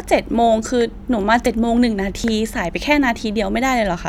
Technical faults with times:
1.46 dropped buffer (overrun)
2.24 dropped buffer (overrun)

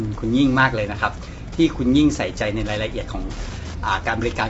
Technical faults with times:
0.00-4.50 Wi-Fi interference
0.00-4.50 low-delay AAC compression

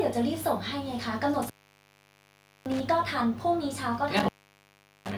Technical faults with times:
1.35-2.80 intermittent contact
4.17-5.12 intermittent contact

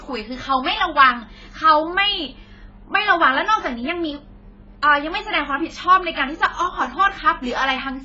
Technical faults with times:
0.00-8.04 AAC compression

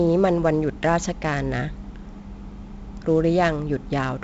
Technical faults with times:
0.00-4.23 4-bit ADPCM compression

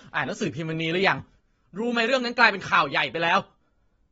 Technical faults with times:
0.00-4.12 AAC compression
1.40-4.12 sudden gain jump

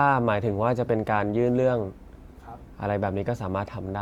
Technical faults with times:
none

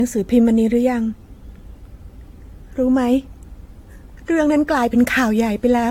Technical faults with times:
0.00-5.90 generation loss

